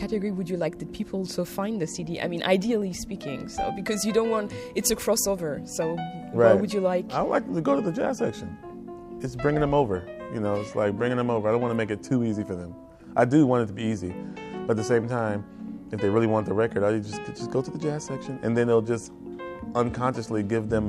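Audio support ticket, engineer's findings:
Corrupt frame decoded, 20.15 to 20.17 s. Brief burst of misplaced energy, roughly one frame long, peaking around -30 dBFS. Decoder played a damaged frame, misreading gains or codes.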